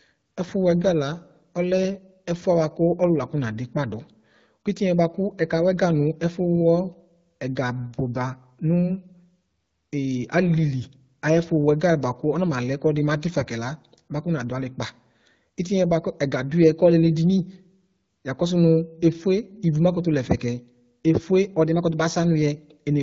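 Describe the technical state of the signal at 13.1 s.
At 13.1 s the speech is intact, with no dropout, distortion or other fault at that moment.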